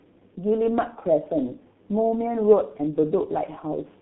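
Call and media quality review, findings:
G.723.1 codec damage, throughout. Speech muffled and hoarse. Consonants smeared. Band limited to 150 Hz to 3.6 kHz. Coarse 30 ms frames with a slowly updated voice model blur fast transitions. Heavy damage fits the 6.3 kbit/s mode. Component: low-rate telephony codec leg.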